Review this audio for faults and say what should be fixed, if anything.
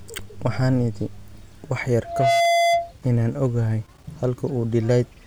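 Loudspeaker feedback squeal from 2.04 to 2.92 s, right after "wax yar": a steady 683 Hz tone swells over roughly a third of a second and settles about 5 dB above the speech before stopping. The microphone is picking up the loudspeaker it feeds, and at 683 Hz the round-trip gain exceeds one, so that frequency reinforces itself each pass. To prevent it, reduce loop gain by moving the microphone away from or behind the loudspeaker, lowering monitor level, or notching 683 Hz.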